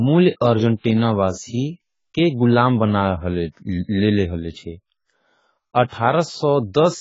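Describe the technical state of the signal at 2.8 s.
At 2.83 s, just after "को गुलाम", there is a single sharp click. The waveform jumps abruptly from one value to a later one. The cause is likely dropped samples. Only a handful seem to be missing, a tiny fraction of a millisecond. That is far too short to remove any audible sound. What remains is the discontinuity itself. It shows as one thin vertical line across the spectrum.

The same moment carries the clip-wide dullness of heavy AAC compression. Nothing sounds above 7.7 kHz. Sibilants come through smeared and fizzy, and sustained vowels warble. That fits a low-bitrate AAC-LC encode of around 16 kbps. At that rate the coder quantises its frequency lines so coarsely that upper bands vanish or turn to noise. The loss is constant here, not confined to the click.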